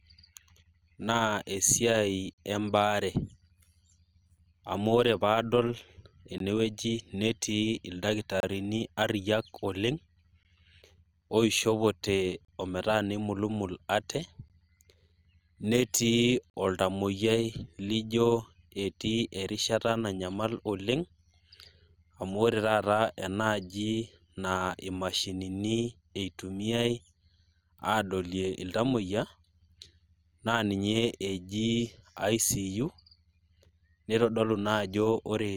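Overlap-add ripple runs through the whole speech clip: frames were rejoined with an overlap whose windows do not sum to constant gain, so level swings about 6 dB once per frame, near 100 Hz. It is a steady metallic buzz with extra tones around each note, not intermittent like dropouts.

Gaps between stream segments fall every 2 s: 2.33–2.38, 4.38, 6.38–6.40, 8.40–8.43 (before "ariayiak oleng"), 10.43 (after "ariayiak oleng"), 12.45–12.48, 14.48 (after "neimulumul ate") and 16.50–16.54 s. Timestamps leave holes of 5 to 44 ms that fill with hard-edged silence. Unlike dropouts, no audio is lost. Later sound is merely delayed.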